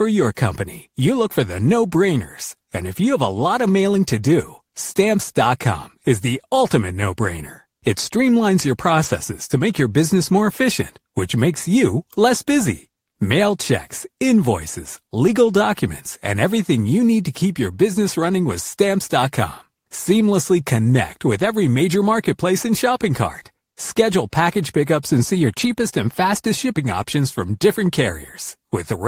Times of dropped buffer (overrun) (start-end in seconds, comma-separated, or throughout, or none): none